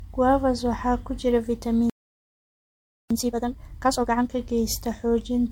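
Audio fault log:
throughout, generation loss. The sound is swirly, smeared and hollow, with blurred attacks. This points to repeated MP3 encoding, likely about five passes near 96 kbit/s.
1.90–3.11 s, playback stall. After "waxaa ku jira" the sound goes silent for about 1.21 s. The player likely ran short of data, then resumed.
3.11–4.31 s, time-compressed catch-up. The sound plays hurried at 2x with normal pitch. Small pieces are cut and cross-faded to clear the backlog.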